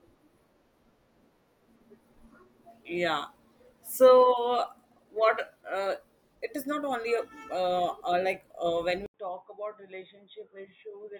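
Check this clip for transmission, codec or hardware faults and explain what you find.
At 9.06 s the speech drops out for 80 ms, then returns about 10 dB quieter and boxy, with nothing above 3.8 kHz and a faint new noise floor. A spectrogram shows the top band vanishing; the waveform shows a gap and a smaller envelope. The input was likely switched to a poorer device.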